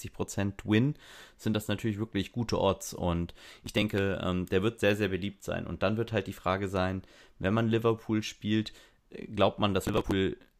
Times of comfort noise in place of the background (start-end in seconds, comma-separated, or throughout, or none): none